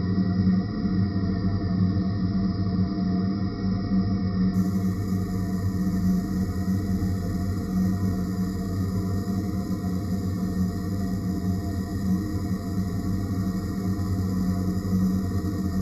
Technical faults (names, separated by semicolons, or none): imaging from sample-and-hold upsampling